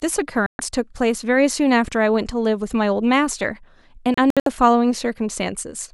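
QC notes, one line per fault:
0.46–0.60 s, digital broadcast dropout: receiver muted about 128 ms of speech, fitting four 32 ms frames lost; flat-line gap, blank vertical band.
4.14–4.47 s, digital broadcast dropout: several short mutes, longest 64 ms, 160 ms lost in total as bad frames came and went; waveform shows repeated gaps.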